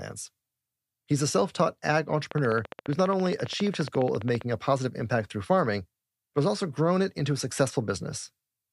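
A train of clicks runs from 2.31 s to 4.42 s, starting just after "a self taught ag" and ending before "a positive impact through". The clicks are evenly spaced at 14.8 per second, about thirty near-identical pulses that stand roughly 10 dB above the speech, so they tick sharply over the talking and through its gaps. Such a steady stream of matching pulses most likely comes from electrical interference or a faulty connection or power supply.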